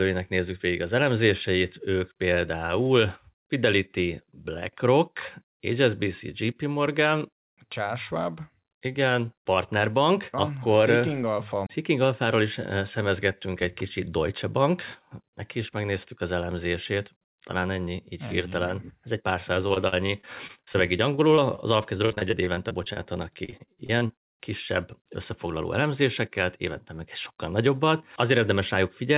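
A speech recording carried over a call path, with nothing above 4 kHz, consistent with a narrowband G.711 mu-law link. Repeated packet loss (robotic sound) hits from 19.68 to 22.98 s and again from 23.34 to 24.33 s. Short gaps follow each other closely, the longest about 46 ms and 33 ms. Each one is patched by stretching the last sound. About 15 to 19 percent of each stretch is concealed this way. The speech turns choppy, with pieces missing.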